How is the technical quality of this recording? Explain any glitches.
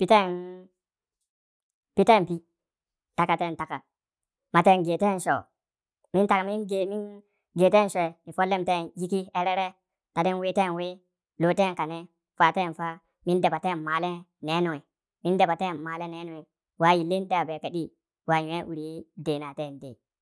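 The whole recording runs fast and high, a classic wrong sample rate problem from start to finish. The samples are being played back faster than they were captured, with no rate conversion, so speed and pitch rise together. Everything moves about 1.38 times too quickly and sits roughly 5.55 semitones sharp, which fits 16 kHz material played out at 22 kHz. The speech comes across hurried and chipmunk-like throughout.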